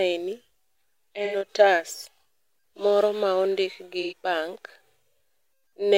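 Speech, interrupted twice by AAC frame loss with concealment, at 1.25–1.36 s and again at 4.02–4.13 s, the second right after "moro ma ondik gi". Each patch lasts roughly a tenth of a second, which fits two consecutive frames going missing (about 85 ms of coded audio). The decoder bridges each gap by reusing the last good spectrum with randomised phase, so the speech turns briefly smeared and noisy, not cleanly cut.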